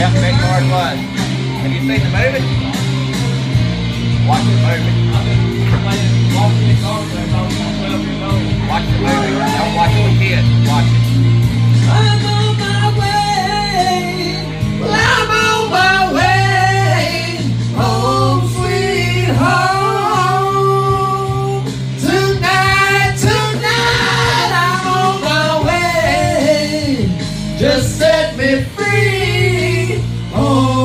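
No technical faults are audible.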